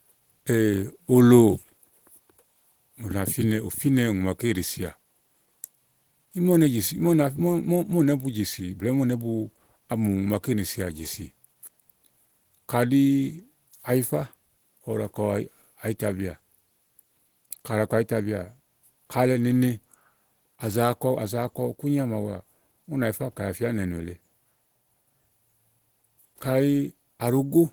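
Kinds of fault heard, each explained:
Opus compression: The speech sounds muffled, hoarse and grainy from start to end. The damage is plainly audible. This is likely Opus in its hybrid speech mode, which fits a rate near 16 kbps. The band stays full, reaching 20.2 kHz.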